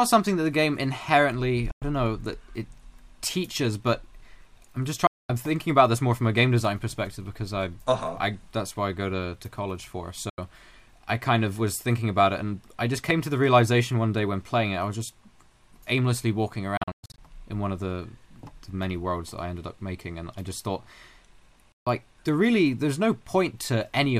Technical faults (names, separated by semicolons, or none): Bluetooth dropout